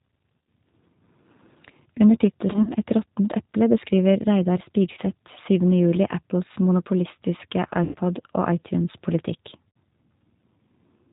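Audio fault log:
Throughout: G.729 codec. The sound is squeezed through an 8 kbit/s model of a vocal tract plus a few pulses per frame. That leaves everything capped at 4 kHz and gives the speech a plainly audible rough, slightly synthetic edge.
0.43 s, 2.53–2.71 s, 4.92–4.99 s, 7.84–7.96 s and 9.69–9.77 s: VoIP packet loss concealed by the speech codec. The gaps run about 50–100 ms, with the longest at 7.84 s. The decoder stretches its last pitch and filter into a buzzy tone or coloured noise that fades, and the audio stays weak for a moment after packets return.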